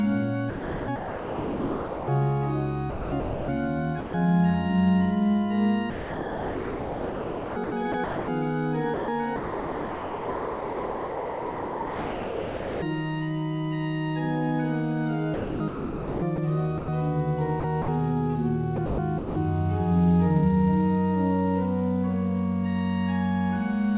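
From 0.5 to 2.08 s and 2.9 to 3.48 s, the sound is chopped by the voice detector. Parts of the sound vanish and return. Synthetic hiss fills the gaps. The likely cause is a sender detector switching on and off, with comfort noise filling in.

At 4.0 to 4.14 s, about 130 ms of sound is dropped, most likely by the voice detector. The detector took it for background. Steady comfort noise replaces it for 140 ms. Then the sound resumes.

The chopping returns at 5.9 to 8.28 s, 8.94 to 12.82 s, 15.34 to 16.88 s, 17.6 to 17.88 s and 18.76 to 19.36 s. The longest stretch loses about 3.6 s to filler. All of it sits on a narrowband call path with nothing above 4 kHz.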